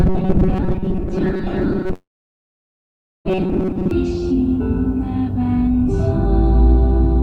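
From 0.01 s to 3.91 s the sound has a hard, metallic buzz locked at 188 Hz, the robotic sound from repeated short buffers. The likely cause is new audio arriving too rarely, so the player looped a stretch of about 5.3 ms (one over 188 Hz) to fill the gaps. Roughly half the material is repeated rather than real. On a spectrogram this appears as evenly spaced horizontal harmonic bands at multiples of 188 Hz, and the waveform shows a short pattern repeating again and again.

Inside that span, from 1.93 s to 3.28 s, a long network dropout occurs. About 1.3 s of audio likely never arrived. The receiver briefly carried the last sound forward as a fading buzz or hiss, and then roughly 1.2 s of near-silence follows before the sound resumes without the lost part. The waveform flattens almost to zero across that gap, and the spectrogram shows a dark, empty band after a short tail that fades out.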